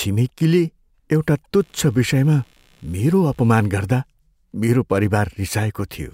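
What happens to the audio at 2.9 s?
Computer activity noise runs through this moment, from 1.60 s to 4.07 s. Load changes in the processor, graphics card or mouse shift the ground shared with the audio circuit, leaking in as a faint buzzing chirp pulsing around 70 times per second, roughly 40 dB below the speech. Unlike mains hum, which holds a steady tone throughout, this noise starts and stops with the computer's workload rather than with the speech.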